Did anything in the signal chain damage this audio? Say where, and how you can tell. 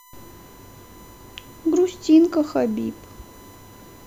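Yes: USB whine from bus current leaking through power or ground, giving a steady 1 kHz tone throughout, roughly 30 dB below the speech.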